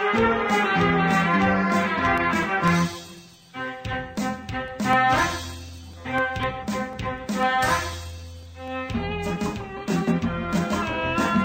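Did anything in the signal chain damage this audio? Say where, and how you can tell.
Yes: periodic USB or driver dropouts at the driver stage, about a millisecond silenced every 0.25 s from 2.18 to 8.93 s. Their strict regularity separates them from random underrun clicks.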